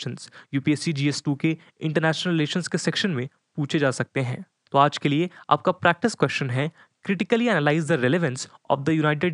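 The speech signal shows no technical faults, with only the room's own background noise audible at about 54 dB below the speech.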